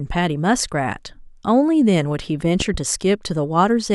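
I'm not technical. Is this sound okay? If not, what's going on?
No. Something in the recording chain was likely hit by a sudden electrical jolt, the kind a plug, switch or static discharge can cause, and that spike was added on top of the recording. The result is a loud pop: two sharp pops close together between 2.60 and 2.77 seconds, clearly louder than the speech itself. The talking carries on underneath, but those two pops stand out.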